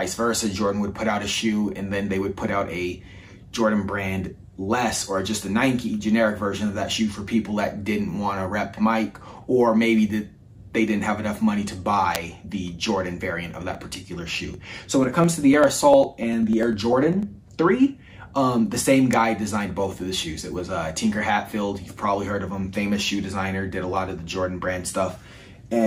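At 12.15 s a nearby switch or static discharge likely arcs and the audio line picks it up, an electrical switching spike heard as a sharp snap laid over the sound. Another snap recurs at 19.13 s.

From 13.75 s to 17.23 s the USB bus or audio driver is blocked every 0.1 s, and about half a millisecond of audio is skipped each time. These periodic USB or driver dropouts produce around forty evenly spaced ticks.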